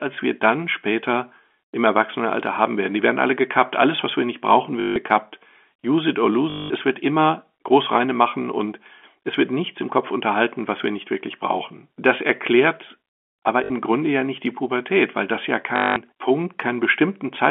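Packet loss with last packet repeated at 4.8 s after "was wir nicht brauchen", 6.5 s, 13.64 s after "erklärt aber" and 15.76 s after "weil das ja", each 60 to 200 ms. The receiver replays the last packet, producing a robotic buzz near 50 Hz, which fits 20 ms packets.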